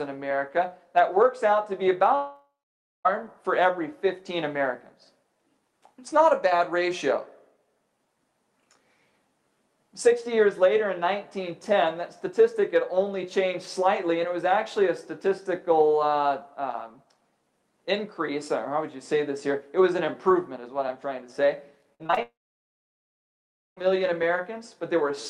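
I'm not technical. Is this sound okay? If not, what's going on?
No. The connection failed in two ways.

Long network dropout: the network connection likely stopped delivering audio entirely for a while. That happened from 2.15 to 3.07 s and again from 22.23 to 23.82 s. Each time, the receiver briefly stretched out the last bit of sound as a fading buzz, then went quiet. About half a second of silence in the first gap and nearly one and a half seconds in the second. When the sound returns, whatever was lost is simply gone.

Repeated packet loss (robotic sound): just before the second dropout, from 21.95 to 22.19 s, small pieces of audio went missing five times in quick succession, the longest about 50 ms. The receiver patched each hole by copying the last sound, so roughly half of that quarter-second is filled-in guesswork. It sounds choppy, and it runs almost straight into the long silence that follows.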